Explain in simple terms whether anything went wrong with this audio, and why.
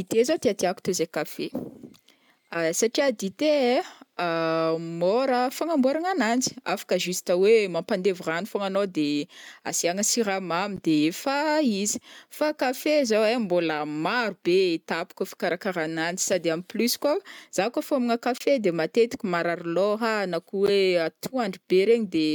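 Three brief bursts of noise cut into the speech, at 10.76–10.79 s, 18.35–18.42 s and 20.66–20.69 s. Each is a corrupt frame decoded: damaged compressed data was played anyway, putting sound at wrong pitches. Stray sound is added instead.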